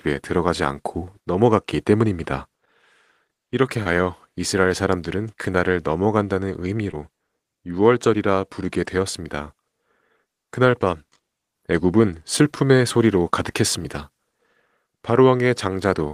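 At 3.83 to 3.87 s and again at 6.91 to 6.95 s the speech carries short concealed packet loss: about 20 ms of the call arrived too late each time, and the receiver patched the gap by extending the preceding sound, then crossfaded back. The result is a brief smear or wobble rather than silence, which separates it from a plain dropout, and there is no sharp edge as a click would have.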